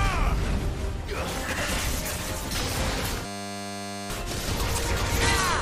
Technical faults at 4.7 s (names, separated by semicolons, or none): chunks out of order